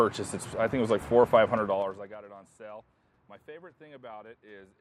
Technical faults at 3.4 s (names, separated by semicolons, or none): none